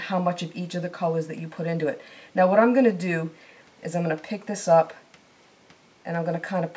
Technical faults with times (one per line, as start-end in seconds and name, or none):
none